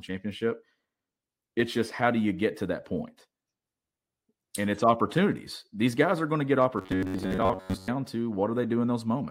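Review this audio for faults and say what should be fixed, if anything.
From 6.78 to 7.94 s, new audio was likely arriving too seldom, so the playback path filled the gaps by replaying its last short buffer while the real signal was skipped, with most of that stretch made of repeats. The result is robotic sound from repeated short buffers: a rigid, metallic buzz locked at about 94 Hz, which fits a buffer of roughly 11 ms, with the speech still loosely traceable underneath. Preventing it means giving the audio path a deeper jitter buffer or steadier delivery so it never has to recycle old samples.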